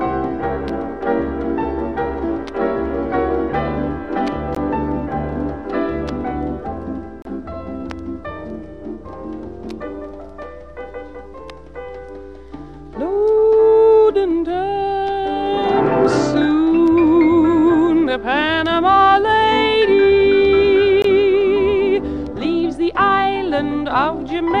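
At 4.55 s, 7.22–7.25 s and 21.02–21.04 s, gaps at joins of encoded pieces leave untrimmed encoder padding: 17–30 ms dropouts, seen as blank vertical strips, before the sound resumes.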